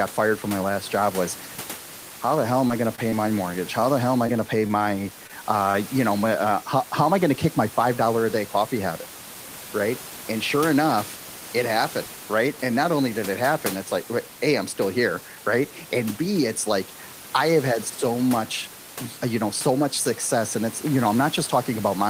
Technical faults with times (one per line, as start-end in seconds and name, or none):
2.67-2.71 short concealed packet loss
2.95-3.00 short stall from a late packet
3.10-3.14 short concealed packet loss
4.27-5.76 scattered short gaps